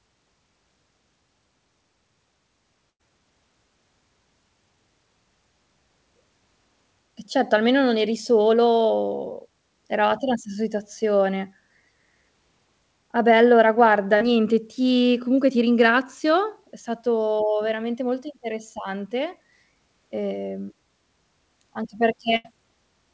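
At 2.90 to 3.01 s there is a burst of packet loss. About 100 ms of audio never arrived. The receiver stretched the last sound and faded it. The speech then resumes further on, with that stretch gone.

At 14.17 to 14.22 s, between "beh allora guarda" and "ti comunque ti ringrazio", a short concealed packet loss occurs. About 40 ms went missing. The decoder patched it by extending the preceding sound, then blended back. It comes across as a brief smear.

At 22.36 to 22.46 s a second burst of packet loss removes about 80 ms. Again the last sound is held and faded before the audio jumps ahead. Nothing is heard above 8 kHz, which fits a wideband call codec.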